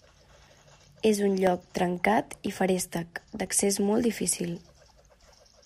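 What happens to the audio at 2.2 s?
Periodic USB or driver dropouts run from 0.47 s to 3.47 s, spanning 3.0 s. At a steady 1.0 s interval, something stalls the USB bus or audio driver, and a few milliseconds of speech are lost and filled with silence, about four times across that span. Each gap sounds like a regular tick or pop in the speech. The moment at 2.2 s falls between two of these evenly spaced cuts.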